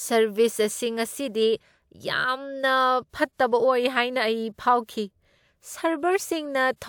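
Nothing in this speech recording stands out as a fault; it simply runs along without anything going wrong that a listener would pick up on.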